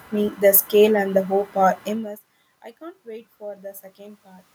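Computer activity noise runs through the whole clip. Processor or peripheral load shifts the audio ground, adding a faint buzz near 1 kHz, roughly 35 dB below the speech. At 3.03 s, after "are immense I can't", the input falls by about 24 dB, so automatic gain rising sets in. The gain climbs about 4 dB by 4.5 s, swelling speech and background together.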